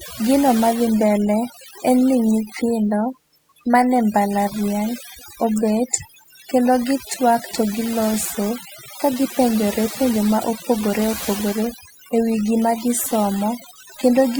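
Throughout the speech, overdone noise removal is audible. The reduction pulls individual frequency bands down or off whenever they sit near the noise estimate, taking quieter speech detail with them. Pauses fall to near silence with twinkling specks.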